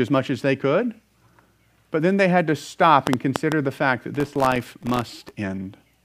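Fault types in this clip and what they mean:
Train of clicks: From 3.07 to 3.53 s, about four uneven clicks tick over the speech, roughly 20 dB above it. Nearby interference is the likely cause.
Processor overload crackle: From 4.15 to 5.34 s, around a hundred missed deadlines leave tiny silent gaps. These fit buffers of under a millisecond and form gritty crackle.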